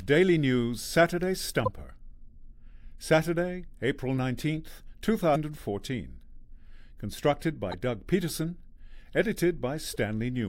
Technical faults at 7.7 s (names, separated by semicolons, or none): damaged data in a compressed stream